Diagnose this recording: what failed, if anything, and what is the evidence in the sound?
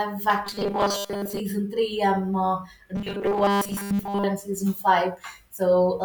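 Robotic sound from repeated short buffers, at 0.45 to 1.40 s (ending just before "three I'm uh") and 2.96 to 4.24 s (from just after "three I'm uh" until "and season"). The speech becomes a rigid metallic buzz fixed at 200 Hz, which points to a fragment of about 5 ms being replayed over and over. Most of the underlying audio is skipped in these spans. The likely cause is a driver or buffer stage receiving audio too seldom and looping the last block to fill the gaps.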